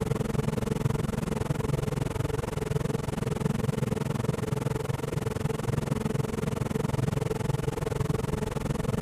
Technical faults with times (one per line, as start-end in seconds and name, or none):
0.00-9.01 overlap-add ripple